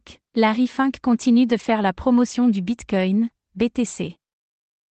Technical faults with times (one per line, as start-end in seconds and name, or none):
1.47-1.69 lost packet rebuilt from error correction